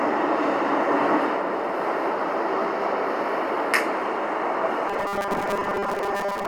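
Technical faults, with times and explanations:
4.89 to 6.47 s: robotic sound from repeated short buffers. To the end, the sound becomes a rigid metallic buzz fixed at 200 Hz, likely because new audio arrives too slowly and a 5 ms stretch is replayed to cover gaps, repeating roughly half the material.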